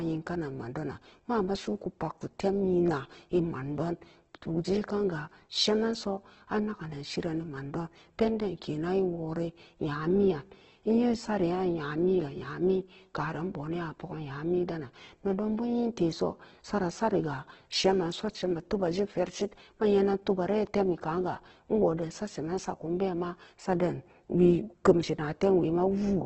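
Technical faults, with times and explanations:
Throughout, Opus compression: the speech sounds grainy and rough, with a noisy texture and no content above 8.2 kHz. This is likely Opus in its CELT music mode under heavy pressure, which fits a bitrate around 12 kbps. It holds the energy in each band but cannot spend enough bits on detail, so it fills bands by folding lower ones or with noise. The bandwidth has been narrowed to wideband.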